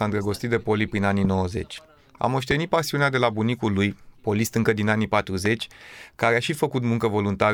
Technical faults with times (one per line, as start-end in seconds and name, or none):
1.25-1.27 loud pop
2.51-2.54 loud pop
5.46-5.48 loud pop